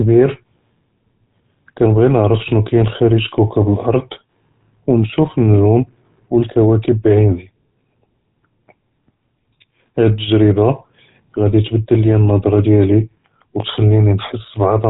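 Throughout, GSM full-rate codec damage gives the speech a buzzy, gravelly roughness from pulse-driven excitation, fitting 13 kbps; the spectrogram shows nothing above 3.8 kHz.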